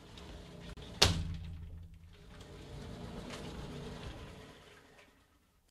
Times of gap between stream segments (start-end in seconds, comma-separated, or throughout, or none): 0.73-0.77